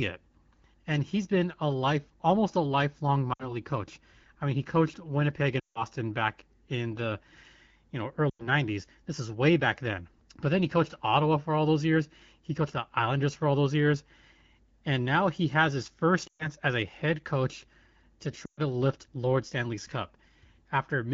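Lost AMR speech frames at 3.33 s (after "life almost a lifelong"), 5.59 s, 8.29 s, 16.27 s (after "he has his first") and 18.45 s (after "a head coach to") make the AMR-WB decoder repeat its last pitch and vocal-tract settings at falling gain. Each gap lasts 60 to 160 ms and drops to near silence within two frames. A spectrogram shows smeared, fading harmonics, and the waveform tapers.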